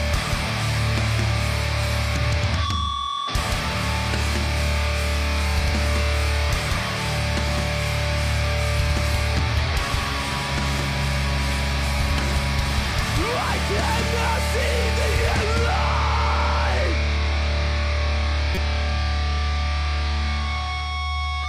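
A corrupt frame decoded around 18.55 to 18.58 s played a few bit-damaged compressed frames anyway, leaving a fairly loud, brief artifact of misplaced energy in the sound.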